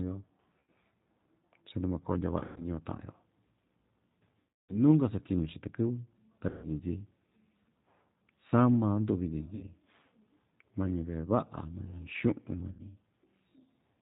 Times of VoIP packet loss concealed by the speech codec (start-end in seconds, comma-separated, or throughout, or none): 0.60-0.70, 2.40-2.65, 4.39-4.81, 6.49-6.68, 9.55-9.64, 12.71-12.84